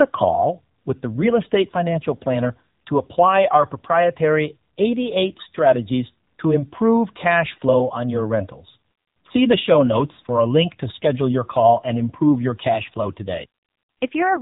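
AMR narrowband mobile codec damage runs through the whole clip. The speech is band-limited at 4 kHz, with nothing above, and the voice comes out plainly buzzy and synthetic as each frame is rebuilt from a vocal-tract model, which fits a low mode around 7.95 kbps.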